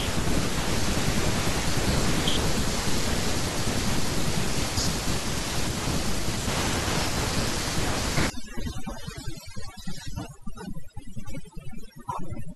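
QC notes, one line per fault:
8.3–12.55 s, overdone noise removal: noise reduction set far too strong shuts off each frequency band near its noise estimate. The room noise, about 17 dB under the speech before this point, drops and breaks up into twinkling specks.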